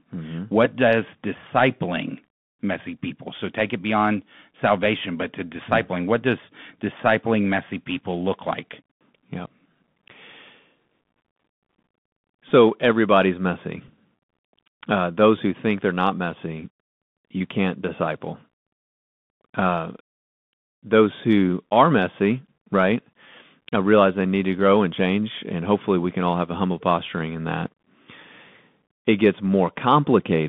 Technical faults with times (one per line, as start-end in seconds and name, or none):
0.00-30.48 Bluetooth CVSD headset codec
12.49 Bluetooth headset packet repeated
13.88 Bluetooth headset packet repeated